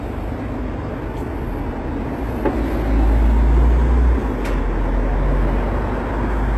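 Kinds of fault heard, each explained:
HE-AAC compression: throughout, with plainly audible damage; the top end, cut off above 12.3 kHz, is likely copied up from lower bands, fitting a 16 kbps stream.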